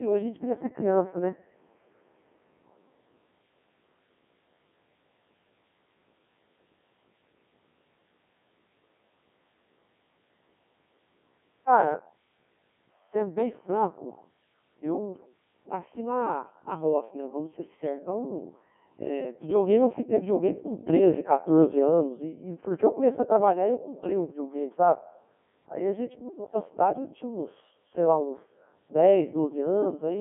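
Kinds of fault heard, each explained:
Codec 2 vocoder: The whole clip has passed through a Codec 2 vocoder. It keeps only pitch, voicing, energy and a rough spectral shape. It then rebuilds the speech from sine waves, so the original waveform is lost. The speech sounds robotic and buzzy throughout, and the damage is heavy. It sits in a narrow band from 200 Hz to 3.4 kHz, with nothing above 3.6 kHz. The coarseness fits a 1.6 kbit/s mode.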